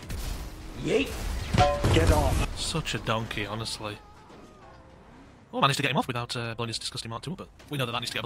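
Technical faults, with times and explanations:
5.58–8.26 s, time-stretched section: the pace abruptly runs 1.79 times faster while the pitch stays put, so the sound turns rushed. This is likely software squeezing the passage to fit a length by cutting out short pieces.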